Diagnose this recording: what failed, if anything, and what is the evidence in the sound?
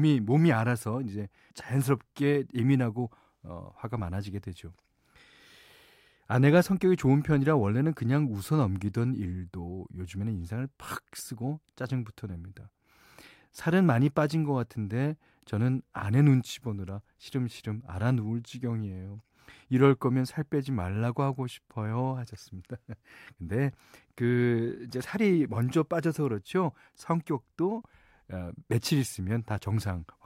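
Nothing failed, and the sound gives no evidence of a fault at any stage.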